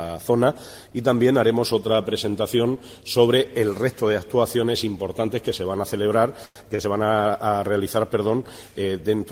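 At 6.45 to 6.58 s there is a call audio freeze: the last sound carries on as a fading buzz or hiss for about 100 ms, ending in roughly 20 ms of silence, then the audio resumes where it stopped with nothing lost. The likely cause is delayed packets draining the jitter buffer. The fade into silence separates it from a simple stall.

At 6.76 to 6.80 s a short stall from a late packet holds the current sound for about 29 ms, giving a slight buzz or dip before the audio continues unbroken. The jitter buffer briefly ran dry waiting for one packet. It is shorter than the freeze and never fades to silence.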